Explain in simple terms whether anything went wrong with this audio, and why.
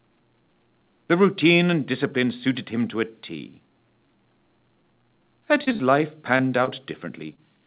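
Between 5.64 and 5.81 s there is repeated packet loss (robotic sound): four quick gaps, about half that stretch patched over, giving a choppy sound with pieces missing rather than a single blip. Short concealed packet loss appears at 6.37–6.41, 6.65–6.69 and 7.34–7.39 s. Each is an isolated smear or wobble of a few hundredths of a second, which is too brief and too spaced out to sound robotic. Throughout, the call line carries nothing above 4 kHz, which gives the clip its narrow, telephone-like tone.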